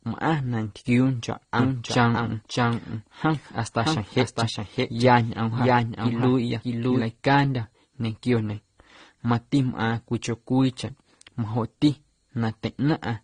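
Speech with nothing above 9.7 kHz and several differing compression artefacts layered throughout, likely from transcoding between lossy codecs such as an MP3, Opus and AAC chain. A single codec would leave one consistent artefact character. From 1.59 to 7.01 s a doubled audio track runs: a full-band copy about 5 dB quieter, trailing by roughly 0.7 s. It has no decay or room colour and switches on and off abruptly, unlike an echo.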